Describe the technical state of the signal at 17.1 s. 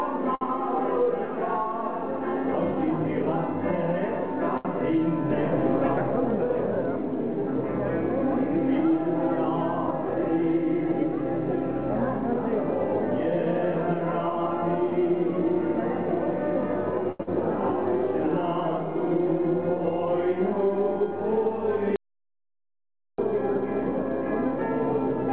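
At 17.12 to 17.22 s there is a short stall from a late packet. The jitter buffer ran dry, so the receiver stretched the preceding sound by about 76 ms before resuming, losing nothing. This adds 76 ms of delay and leaves one sound briefly held.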